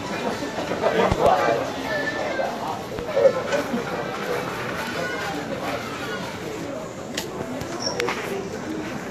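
A recording of everyday sounds whose likely cause of damage is low-bitrate Vorbis compression, consistent with roughly 36 kbps. It removes everything above 14.2 kHz and turns fine treble detail into grainy, hissy noise. Two likely electrical voltage spikes add loud pops: a double pop from 1.12 to 1.29 s, peaking around 20 dB above the sound, and a single pop at 2.99 to 3.01 s, around 15 dB above it.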